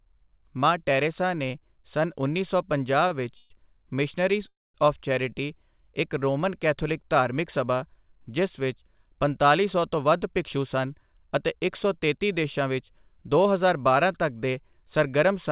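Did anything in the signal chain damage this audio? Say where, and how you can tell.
Yes, and it's all network and jitter-buffer trouble on the call path. Right after "ਨੇ ਸੰਨਉੱਨੀ ਸੌ ਪੰਜਾਹ" there's a short stall from a late packet around 3.08 to 3.26 s. A packet showed up late, the buffer ran dry, and the receiver held the last sound for about 22 ms before carrying on from the same place.

Then come two call audio freezes, each likely from packets held up in transit. At 3.37 to 3.52 s the last sound gets stretched into a fading buzz for about 132 ms. At 4.48 to 4.76 s the wait is 265 ms, and about 210 ms of it sits in silence before the audio resumes where it stopped.

Between "ਪੰਤਾਲੀ ਸੌ" and "ਬਾਰਾਂ ਤੱਕ", from 9.97 to 13.83 s, you get a jitter buffer speed-up. The speech runs about 6% fast at unchanged pitch and sounds a touch hurried, because the buffer trimmed tiny pitch-period slices, roughly a third of a second in total, to bring its delay back down.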